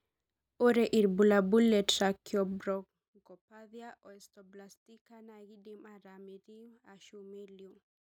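From 2.52 to 3.06 s the speech carries zipper noise. The level falls by roughly 25 dB in coarse, unsmoothed steps, about a hundred per second. Each jump leaves a tiny click, so a fast ticking buzz rides on the speech while it fades.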